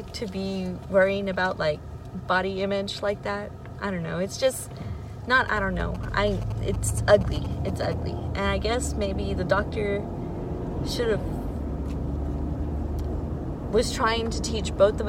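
A nearby 2G handset transmitting only short signalling bursts, rather than a continuous call, is picked up and rectified by the audio circuitry, producing GSM signalling bursts from 5.48 to 7.94 s. The rectified radio pulses come through as a galloping dit-dit-dit of brief buzzes pitched at about 217 Hz, the handset's burst repetition rate, sitting roughly 15 dB below the wanted audio and stopping once the phone's signalling ends.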